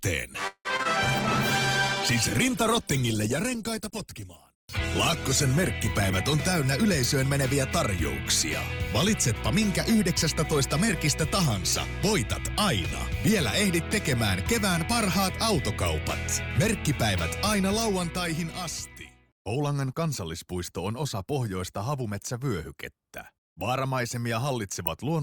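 Right at the start, from 0.47 to 0.87 s, there's repeated packet loss that gives a choppy sound. Three holes get patched by stretching the last bit of audio, the longest about 174 ms, so over half that stretch is concealed and a sliver is simply missing. Then from 1.03 to 7.41 s there's a call bitrate drop. The sound goes rough and muffled as the encoder codes coarsely and loses the highs, which suggests a fall from around 64 kbps to about 16 kbps, sitting at the bottom for roughly 4.9 s. Finally there are three jitter buffer speed-ups, where the receiver trims short pitch-period chunks to shed backed-up delay so the audio runs faster at the same pitch: 6.37 to 7.39 s at 105% speed, 10.81 to 15.17 s at 101%, and 17.54 to 19.75 s at 103%. Each one drops only a few hundredths of a second in total.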